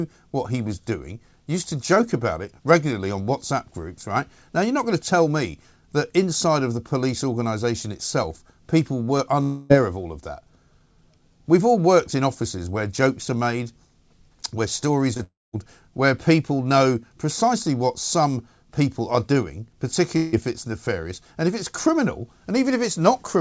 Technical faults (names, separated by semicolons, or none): short concealed packet loss; long network dropout